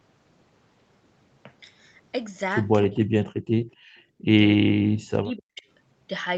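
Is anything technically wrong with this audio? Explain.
Yes. Speech suppressed in double talk occurs at 2.85–3.33 s, 3.63–3.67 s and 4.95–5.64 s. The speech dips by up to around 40 dB, likely because an echo canceller ducked everything while both sides talked.

An echo leak at 3.71–3.75 s brings back a very faint copy of the speech about 260 ms late, likely residual loudspeaker echo. It is distinct from room reverb because it is a discrete delayed repeat.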